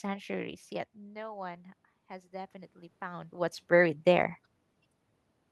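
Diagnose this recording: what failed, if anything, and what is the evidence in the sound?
Between 1.12 and 3.65 s, voice and background swell by about 6 dB: automatic gain rising in call processing, compensating for an input drop of about 16 dB.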